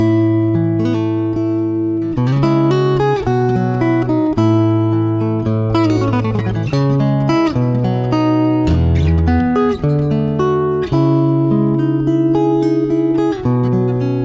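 No technical faults are audible anywhere in the recording.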